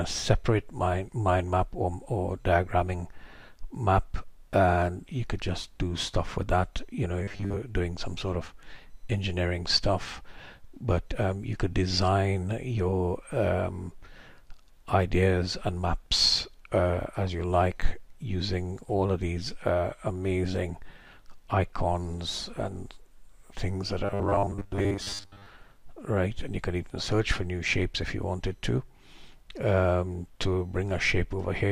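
Likely starved audio buffers, with the last 10 ms repeated in place of most of the real audio, give robotic sound from repeated short buffers, a rigid metallic 100 Hz buzz, at 7.24–7.57 s and 24.05–25.46 s.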